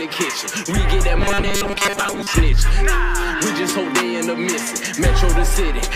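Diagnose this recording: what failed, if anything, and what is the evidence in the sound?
From 1.19 s to 2.33 s the sound collapses into a stiff, metallic buzz pitched at 200 Hz. That's robotic sound from repeated short buffers, most likely at the driver or buffer stage. New audio wasn't arriving fast enough, so the same chunk kept being replayed while real material was dropped, with most of that stretch being repeats. A 200 Hz buzz means a 5 ms chunk looping, and that loop rate is what imposes the fixed-rate buzz.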